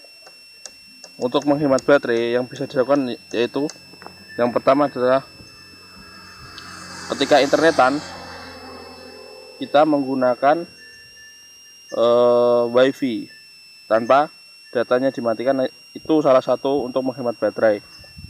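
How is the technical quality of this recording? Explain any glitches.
The recording carries a switching supply whistle throughout: a power supply running in audible burst mode or beating with another supply adds a thin high tone wandering between 2.6 and 2.8 kHz, roughly 30 dB below the sound. On a spectrogram it appears as a narrow, slightly drifting horizontal line.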